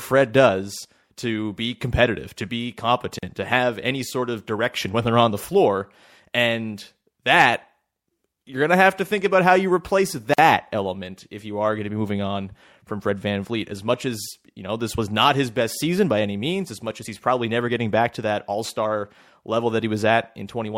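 At 3.19 s, after "be competitive to be", and at 10.34 s, after "about how you replace", a gap at a join of encoded pieces opens: gaps of about 41 ms and 48 ms left by untrimmed encoder delay and padding. Unlike a dropout, the speech resumes exactly where it stopped, with nothing missing.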